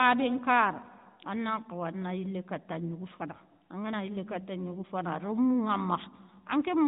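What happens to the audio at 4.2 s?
At 4.2 s there is no fault: the speech carries on intact through that moment.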